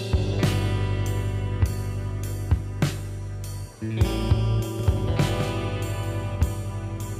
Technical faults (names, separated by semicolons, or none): doubled audio track